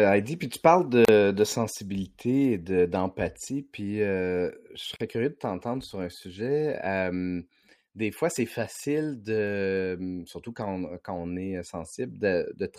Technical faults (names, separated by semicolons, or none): gap at a join of encoded pieces